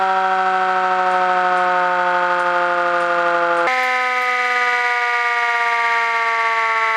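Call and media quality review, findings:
Section at the wrong speed, 3.67 s to end. Sound abruptly hurried and raised, 1.5x speed, pitch up roughly a fifth. Likely cause: resampling or clock mismatch in playback or editing. Spectrogram: harmonics and formant bands jump upward at the boundary. Waveform: envelopes compressed in time.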